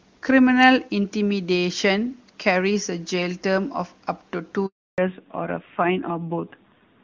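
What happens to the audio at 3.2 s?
Nothing goes wrong at 3.2 s: the speech carries on intact, with the high-rate AMR wideband (HD Voice) coding leaving it clear.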